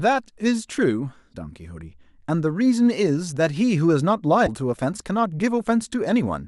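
A speech recording with two brief glitches, at 1.32 s and again at 4.46 s, each lasting about 30 ms, roughly the length of one 26.1 ms MP3 frame. The sound jumps forward, which separates it from an ordinary dropout. The likely cause is a broken MP3 bit reservoir, where the frame after a cut looks back for data held in a removed frame and decodes bytes of another frame instead.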